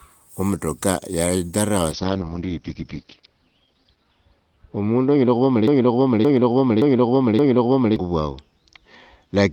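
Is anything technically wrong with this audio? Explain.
Yes, there are two faults.

From 1.93 s, right after "wo mutoka yadharawa", to the end, there is a call bitrate drop. The encoder was starved of bits, which fits a fall from about 32 to 7 kbps. Its bandwidth shrank from 20 kHz to 6 kHz, so the speech turns muffled and rough, worst for about 2 s.

From 5.68 to 7.96 s there is a broken-record loop. The stream likely stalled and kept replaying its last 0.57 s fragment, which repeats four times back to back. The speech that belonged there is lost.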